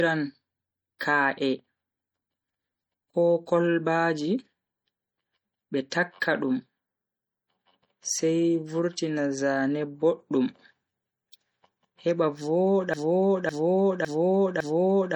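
A speech recording carries two faults. Throughout, it most likely passed through MP3 compression at a low bitrate, which fits roughly 48 kbps. Starved of bits, the encoder discarded weak frequency lines that flicker in and out from frame to frame. That damage is plainly audible as a watery, swirling texture with metallic chirps on s sounds and smeared consonant attacks, even though content still reaches up to about 21.1 kHz. From 12.94 s to the end, the stream likely stalled and kept resending the last fragment it held, producing a broken-record loop. A 0.56 s piece of audio repeats exactly, back to back, four times until the clip stops, and whatever should have played after 12.94 s is lost.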